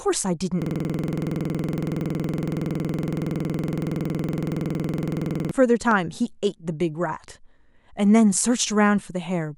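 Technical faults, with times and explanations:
0.62 to 5.51 s, system hang loop: The sound freezes into a rapid, rattling stutter as one 46.44 ms slice of audio repeats about 105 times, at 21.5 per second. The playback side stalled while the audio hardware kept replaying the same ring buffer, which fits a 2048-sample buffer. On a waveform this appears as identical blocks repeated end to end. On a spectrogram it shows as one frozen spectral slice copied across time, with vertical seams at every loop boundary.
5.91 to 5.95 s, loud pop: A single sharp pop lands on top of the sound, peaking about 10 dB above it, while the audio continues underneath. A sudden voltage step or spike, likely from a driver glitch, switch or static discharge, was added to the signal, and the following circuitry shaped it. The waveform shows a tall, narrow spike rising well above the surrounding signal. The spectrogram shows a bright vertical stripe spanning nearly all frequencies.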